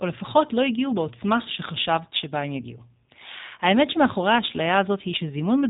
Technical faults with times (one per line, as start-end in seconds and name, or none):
0.00-5.70 G.729 codec